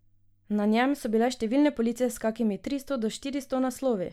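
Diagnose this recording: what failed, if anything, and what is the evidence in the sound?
No fault can be heard.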